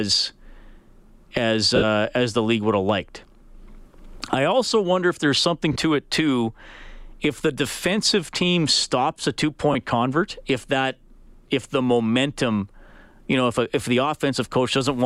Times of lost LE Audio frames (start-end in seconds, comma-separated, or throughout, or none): 1.76-1.84, 5.73-5.76, 9.73-9.75